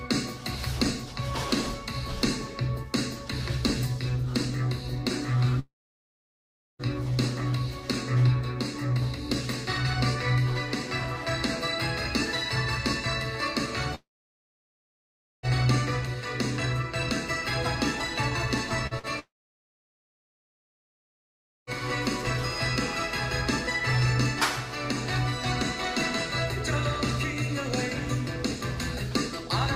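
At 5.59 s the sound suddenly stops, and it comes back at 6.82 s. That's a long network dropout. About 1.2 s of audio never arrived, most likely because the stream stalled on the way. The receiver carries the last bit on as a quick fading buzz, and then there's roughly a second of near silence. When the audio returns, it picks up later on, and whatever was lost is simply gone. The same thing happens from 13.95 s to 15.46 s. This gap is a bit longer, about 1.5 s missing, and it's likely the same network stall. After a short smeared tail, you get about 1.4 s of dead air.

Just before 19 s there are two quick glitches, one at 18.87 to 18.94 s and another at 18.99 to 19.06 s. These are short concealed packet losses. About 40 ms went missing each time, and the decoder patched over it by stretching the sound that came just before. You hear them as two small wobbles or smears in quick succession, and any very short sound in those slots could drop out.

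Right after that, from 19.19 s to 21.70 s, comes the biggest long network dropout. About 2.5 s is lost, again likely from the connection stalling. There's a brief fading continuation and then roughly 2.4 s of silence before the audio resumes further along.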